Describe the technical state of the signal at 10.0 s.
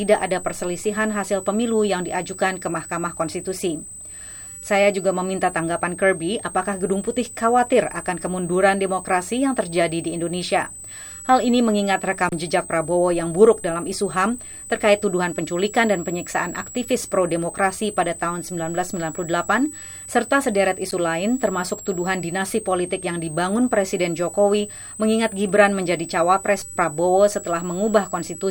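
A switching power supply is running in an audible burst mode or beating with another one throughout, so at 10.0 s a switching supply whistle sits between 7.6 and 8.4 kHz, about 15 dB below the sound.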